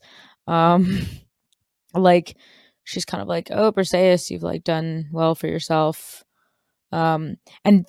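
Listening through the speech recording, nothing stood out as a technical problem at any point.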